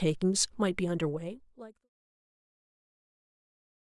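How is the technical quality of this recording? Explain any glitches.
No glitches are audible in this speech recording.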